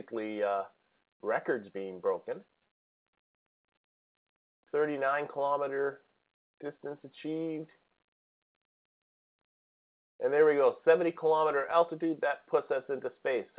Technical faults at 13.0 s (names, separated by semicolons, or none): none